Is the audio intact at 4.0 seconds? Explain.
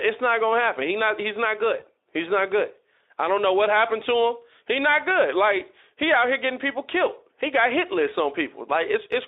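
No. Just after "I don't know what", from 3.99 to 4.03 s, there is VoIP packet loss concealed by the speech codec, consistent with one lost 20 ms frame. The decoder rebuilt the gap from its last pitch and filter state, giving a brief buzzy or noisy patch that fades.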